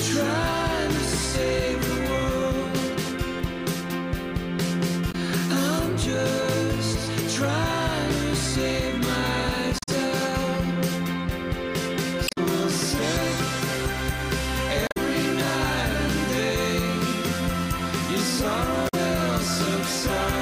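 Damaged data in a compressed stream appears at 5.08–5.15 s, 9.76–9.89 s, 12.25–12.38 s, 14.85–14.97 s and 18.85–18.94 s. Corrupted bytes make the decoder misread frames and lose sync while it hunts for the next header, so each 70–130 ms event is a short chirp, squawk, click or hole.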